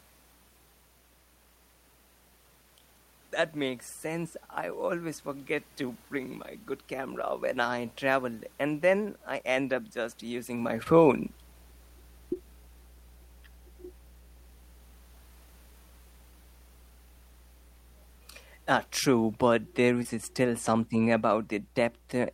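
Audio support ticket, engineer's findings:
Mains hum, throughout. Steady 60 Hz tone with low harmonics, roughly 20 dB under the speech. Ground loop or nearby transformer coupling line power into the analogue front end. Check grounding and cable routing at the capture device.

Short concealed packet loss at 10.83–10.88 s, 12.34–12.37 s and 20.03–20.16 s. Brief smears or wobbles where the decoder extended the previous sound over each gap, then crossfaded back. Each hole fits one 20 ms frame. The level change near 10.5 s is talker movement.

Automatic gain falling, 17.95–19.59 s. Speech and background sink together by about 4 dB over roughly 1.6 s. AGC judged the input too hot or its background noise too strong and ramped its gain down. Review the AGC target level and attack settings.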